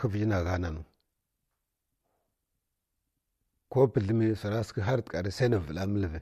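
No technical faults are audible anywhere here.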